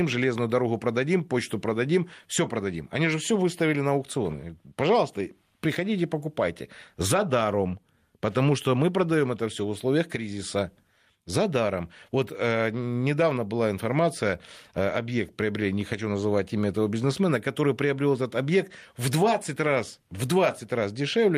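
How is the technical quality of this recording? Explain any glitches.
No technical glitches can be heard in this recording.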